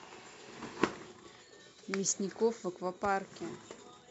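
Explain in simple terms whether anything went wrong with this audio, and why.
Nothing went wrong: at no point in the speech recording is there any fault to report, so there's nothing to fix.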